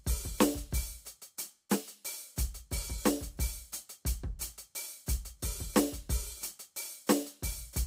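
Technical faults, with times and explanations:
No technical faults, with times or otherwise, can be heard in this music.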